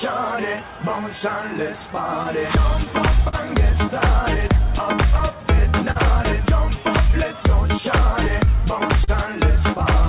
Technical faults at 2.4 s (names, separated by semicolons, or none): clock drift between sender and receiver; scattered short gaps; repeated timing corrections